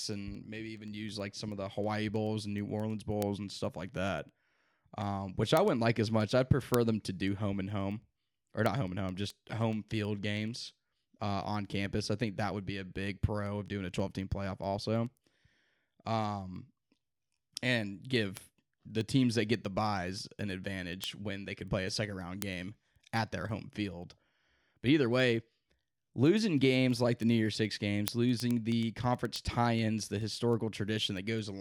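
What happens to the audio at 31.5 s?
Word clock ticks continue through 31.5 s, from 0.13 s to 31.6 s: an unlocked digital link slips a sample at a time, giving sharp ticks at a steady rate of about ten a second, unlike randomly spaced clicks.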